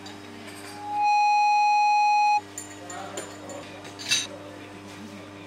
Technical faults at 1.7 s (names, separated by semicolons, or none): loudspeaker feedback squeal